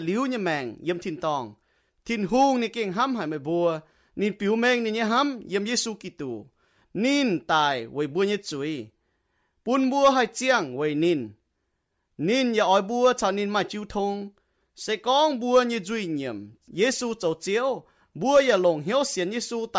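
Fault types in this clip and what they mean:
Nothing stood out on listening to the recording, and there is no technical fault to list.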